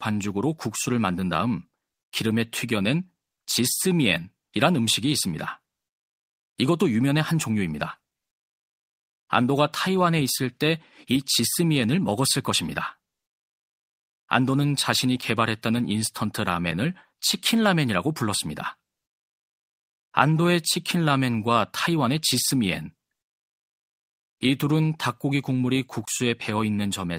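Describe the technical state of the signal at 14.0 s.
At 14.0 s the speech signal is intact, with no technical fault present at that moment.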